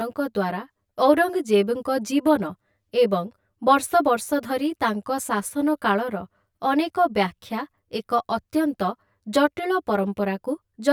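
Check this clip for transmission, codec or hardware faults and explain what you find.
The speech carries one fault, present throughout: channel delay causing comb filtering. One channel arrives around 10 ms behind the other, and when the two are summed to mono, the shared content cancels at regularly spaced frequencies. The first notch falls near 50 Hz, with further notches repeating roughly every 100 Hz above it. This dense, fixed pattern of cuts gives the speech a hollow, phasey quality from start to finish.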